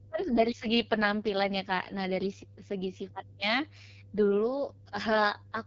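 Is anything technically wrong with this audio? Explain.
Yes, two faults run through the whole speech clip.

Mains hum sits under everything: a steady 50 Hz tone with low harmonics, roughly 25 dB below the speech, from power-line leakage such as a ground loop. Unlike rumble or wind noise, it holds one fixed pitch and never fluctuates.

The AMR wideband (HD Voice) codec damage is heavy. The speech is rough and raspy, with nothing above 7.2 kHz and a noise-filled top band, which fits AMR-WB's lowest 6.6 kbit/s mode. Narrowband codecs cut off near 3.4 kHz.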